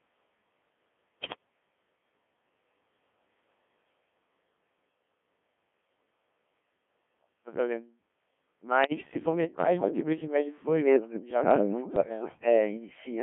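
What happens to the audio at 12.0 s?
Around 12.0 s two faults overlap. From 11.61 to 12.46 s the speech sinks by up to roughly 25 dB and thins out in patches, most likely speech suppressed in double talk: an echo canceller, unable to separate this talker from the far end's loudspeaker echo, turned down the whole signal. Across roughly 700 ms of that span the voice dips, loses its top end or cuts out in pieces.

Inside that dip, from 11.96 to 12.09 s, come bit errors on digital voice radio. Corrupted bits reach the 1.3 kbit/s Codec 2 vocoder, and because each bit steers the pitch, level or spectral shape of a whole synthesised frame, the voice lurches into a brief warbling, bleepy burst. The burst is short enough to fit roughly two corrupted frames. What sets it apart from the steady buzzy, robotic Codec 2 sound is this sudden garbling of pitch and tone colour, where the suppression only makes the sound quieter and duller.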